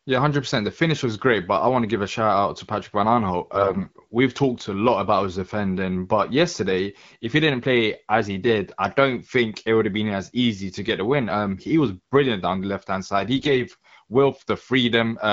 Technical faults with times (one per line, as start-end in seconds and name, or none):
3.54-3.98 AMR bit errors
13.36-13.61 AMR bit errors